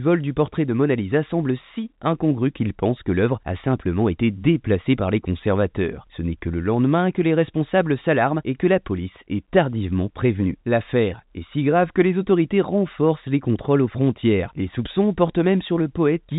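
Speech carried over a standard telephone path, with nothing above about 3.8 kHz as expected of G.711 telephone coding, and no faults to report.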